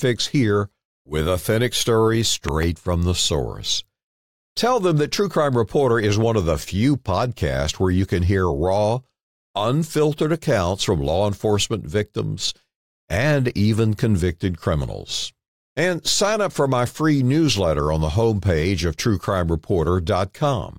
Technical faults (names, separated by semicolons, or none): loud pop